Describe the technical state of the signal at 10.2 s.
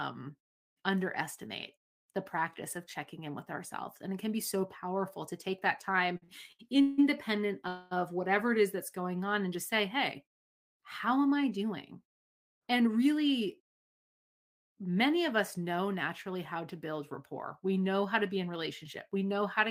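At 10.2 s the speech signal is intact, with no technical fault at that moment.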